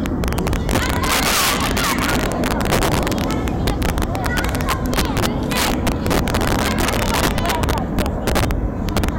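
Violent, splintering cracks burst out of the peaks of these sounds from start to finish, far harsher than ordinary clipping. This is integer overflow: the signal was pushed about 12 dB too hot, and the few percent of samples past the limit wrapped to the opposite extreme.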